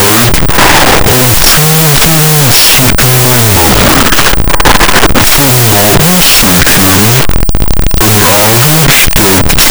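A wrong sample width runs through the whole speech clip: data written as 16-bit integers is being read as unsigned 8-bit, so each sample splits into two. Playback runs at half speed, an octave low, with the speech buried under loud, distorted noise.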